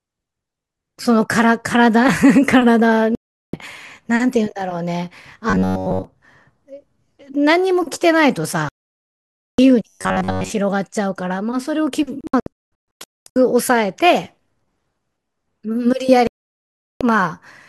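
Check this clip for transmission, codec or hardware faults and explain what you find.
Two kinds of fault appear: four digital broadcast dropouts and two stretches of robotic sound from repeated short buffers.

Digital broadcast dropouts at 3.15–3.54 s, 8.69–9.59 s, 12.21–13.36 s and 16.27–17.01 s: the receiver lost valid frames and muted, so the speech vanishes and returns later. The third is several short holes, the longest about 0.22 s.

Robotic sound from repeated short buffers at 5.50–6.04 s and 9.89–10.52 s: the speech becomes a rigid metallic buzz at 93.8 Hz. The likely cause is a buffer of about 10.7 ms being replayed while most of the real audio is skipped.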